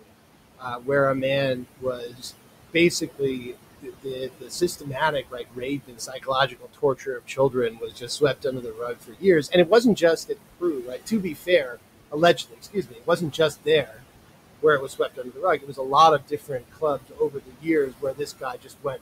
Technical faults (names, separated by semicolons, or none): noise suppressor artifacts; speech cut by the noise suppressor